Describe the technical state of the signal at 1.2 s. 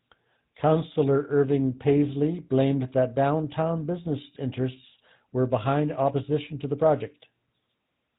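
At 1.2 s the speech is passing through a GSM full-rate codec, which affects the entire clip rather than this moment alone. The codec rebuilds speech from a vocal-tract filter excited by a regular pulse train that keeps only every third excitation sample, and it discards everything above 4 kHz. The result here is plainly audible: a dull, band-limited sound with a buzzy, gravelly roughness, consistent with a codec running at about 13 kbps.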